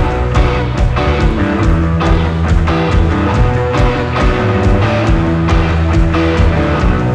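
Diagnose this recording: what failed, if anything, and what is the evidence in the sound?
Listening closely, nothing in the recording stood out as a failure at any stage of the chain.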